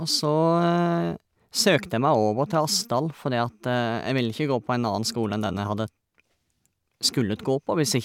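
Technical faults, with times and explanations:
No technical faults can be heard anywhere in the recording.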